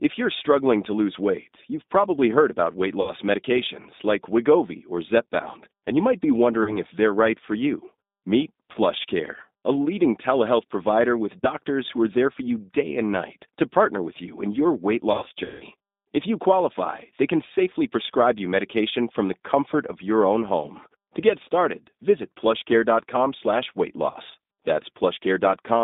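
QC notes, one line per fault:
Throughout, G.729 codec: the 8 kbit/s speech model limits the line to about 200 Hz to 3.7 kHz and rebuilds each 10 ms frame from a few pulses, giving a rough, slightly synthetic edge, not the clean muffling of simple band-limiting.
3.01 s (after "probably heard about weight"), 6.63 s, 8.72 s, 11.41 s (after "leading telehealth provider with"), 15.12 to 15.64 s (after "you in your weight") and 24.11 s, VoIP packet loss concealed by the speech codec: the decoder stretches the last pitch and filter to cover each gap, so the sound turns into a fading buzzy tone or coloured noise instead of dropping to silence. The gaps last 20 to 60 ms, and 300 ms is scattered across about half a second at 15.12 s. The sound stays weak briefly after each gap.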